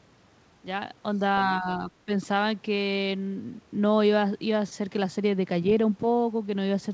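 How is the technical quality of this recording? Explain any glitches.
The recording has one clear glitch, heard over a call path whose band stops at 8 kHz, as a wideband codec such as G.722 would leave it. Between 1.61 and 2.11 s, the speech is suppressed in double talk. The echo canceller likely mistook the talker for loudspeaker echo while both sides spoke, and pulled the level down. It dips by roughly 10 dB in patches, about 150 ms in total. On the waveform this shows as a pinched envelope, and the spectrogram has faded, gappy bands.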